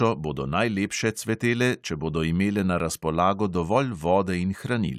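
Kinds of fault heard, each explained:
No technical faults can be heard anywhere in the speech; the signal stays continuous and stable throughout.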